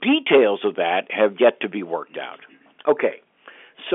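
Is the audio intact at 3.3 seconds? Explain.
Yes, at 3.3 seconds the audio is intact, with only the narrow telephone band of the G.711 telephone coding path, which carries nothing above about 3.6 kHz.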